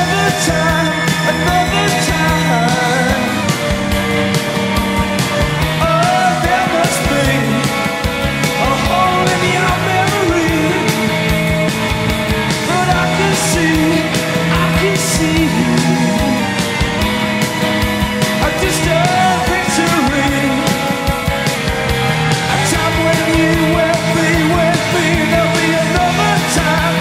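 A drift correction step, likely from clock-matching software abruptly slowing playback by 5.8%, drops speed and pitch about a semitone (104 cents) at 3.43–5.60 s, 16.39–16.99 s and 21.56–22.59 s, each snapping back afterwards.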